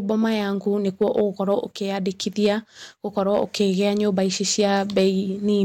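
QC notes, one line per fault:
0.11 s: hard clipping, a brief crackle where a peak overshoots the available range by about 1 dB and is cut flat.
1.02 to 1.59 s: hard clipping, harsh fuzz on loud speech as peaks exceed the limit by about 3 dB; the squared tops add high harmonics.
2.44 to 2.49 s: hard clipping, a short burst of the same roughly 3 dB overload.
3.18 to 5.08 s: hard clipping, sustained fuzz on every loud syllable from peaks flattened about 3 dB over the limit.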